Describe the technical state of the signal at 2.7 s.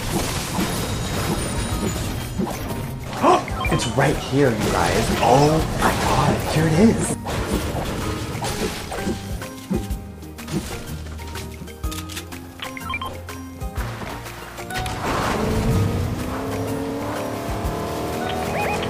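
At 2.7 s the signal is intact, with no technical fault audible at that point.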